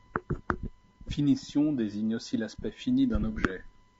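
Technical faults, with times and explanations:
Throughout, low-delay AAC compression: the speech carries plainly audible coding damage, likely from AAC-ELD at a rate that fits roughly 32 kbps. Its short frames resolve pitch harmonics poorly and spend bits fast, leaving grainy noise between harmonics and a thinned top band.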